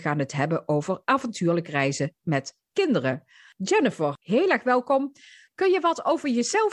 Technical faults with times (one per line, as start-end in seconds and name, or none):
none